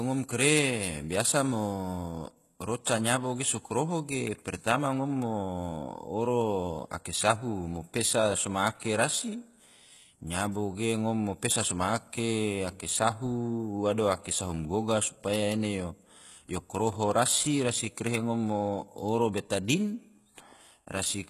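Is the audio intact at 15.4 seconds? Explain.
No. At 15.4 seconds the speech carries the same damage heard across the whole clip, most likely HE-AAC compression at a very low rate, consistent with something near 16 kbps. Only the lower spectrum is coded properly; the treble is rebuilt by copying lower bands upward, so s sounds come out gritty and lispy. A spectrogram shows a hard ceiling at about 12.3 kHz and smeared, repeated-looking patches above the crossover.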